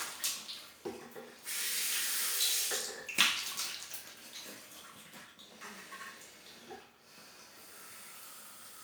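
No technical faults can be heard anywhere in the recording of sounds.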